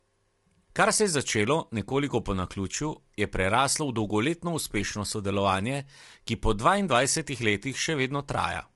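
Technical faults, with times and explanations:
Throughout, low-delay AAC compression: plainly audible coding damage and nothing above 11.6 kHz, likely AAC-ELD's short frames starved at a rate fitting 32 kbps.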